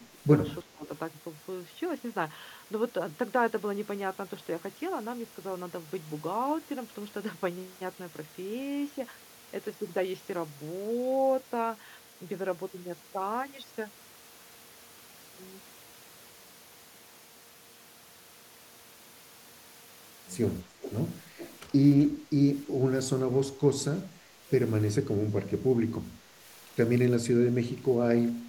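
From 0.08 to 0.89 s the speech dips in pieces, by about 15 dB at worst. This is likely speech suppressed in double talk, with the canceller turning down both sides at once. From 20.82 to 21.59 s a faint delayed copy trails the speech by 377 ms, about 15 dB down. That is likely an echo leak from a loudspeaker end. Further brief dips of about 5 to 15 dB fall at 23.52 to 23.6, 24.2 to 24.51, 25.87 to 26.37 and 28.28 to 28.48 s, likely the same double-talk suppression.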